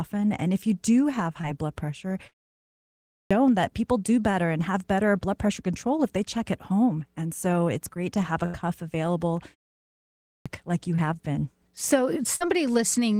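A speech recording with two kinds of fault. Clipped start after a pause occurs twice. After "blood pressure" and a 0.47 s pause, the sound at 2.72 to 3.31 s is swallowed, about 0.59 s, so "that people do better" begins abruptly. At 9.85 to 10.46 s, after a 0.38 s pause, about 0.61 s is lost before "like you". The output device is likely going idle in silence and taking that long to wake. A burst of packet loss appears at 8.46 to 8.56 s, just after "great to have a", where the receiver stretches the last sound for about 80 ms while lowering its level. At 12.36 to 12.43 s, about 48 ms is filled the same way. In both places the speech resumes further on, with the underlying audio in between missing.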